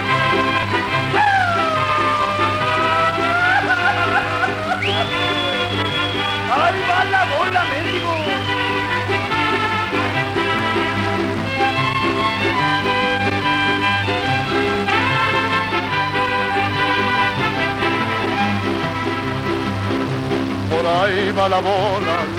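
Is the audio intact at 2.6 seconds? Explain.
No. At 2.62 s there is a dropped buffer (overrun): an abrupt jump forward, with about 40 ms of sound missing. Likely the program failed to collect a buffer before the hardware overwrote it. Unlike a dropout, no silent gap is left.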